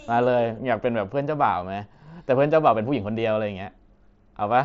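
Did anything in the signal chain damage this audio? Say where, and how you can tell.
No, nothing in this speech stood out on listening as damage from any stage of the chain, with the Bluetooth mSBC headset codec path audible as the expected wideband limit near 7.7 kHz and light codec damage.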